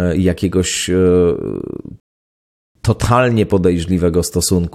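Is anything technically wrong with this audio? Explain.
Yes. At about 2.00 s the speech cuts to silence until 2.75 s, a rebuffering stall: playback ran dry waiting for data, then picked up right where it stopped. Nothing's missing, but about 0.75 s of dead air gets inserted.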